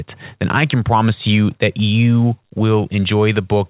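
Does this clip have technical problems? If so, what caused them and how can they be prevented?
No, the speech carries no technical faults, and its content stops at about 4 kHz, which fits a narrowband call path such as 64 kbps G.711.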